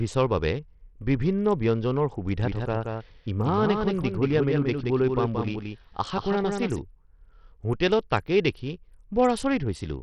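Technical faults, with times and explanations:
Throughout, Bluetooth SBC compression: the speech has nothing above 12 kHz, and the top end thins and flickers while a gritty, grainy layer clings to every syllable. This is likely the work of SBC at a small bit pool, which fits a rate near 64 kbps. The codec splits the sound into a few wide sub-bands and gives the quiet upper bands almost no bits, so the treble drops away. The remaining bands are coarsely quantised, which leaves that rough, aliased texture.
2.43 to 6.79 s, doubled audio track: a second full-band copy of the speech runs about a fifth of a second behind the original and about 5 dB quieter. It appears abruptly at 2.43 s and vanishes just as suddenly at 6.79 s. The copy has no decay or room colour, so it sounds like a flat, detached echo rather than reverberation. The likely cause is the same signal reaching the mix twice, with one path lagging the other.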